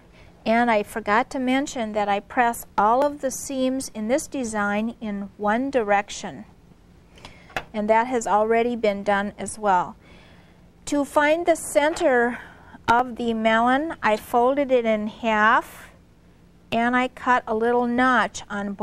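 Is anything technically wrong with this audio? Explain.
Yes. Audio missing between chunks, likely from 5-second chunk processing, drops a sliver of roughly 15 ms at each handover, heard as abrupt skips at 3.02, 12.99 and 17.98 s.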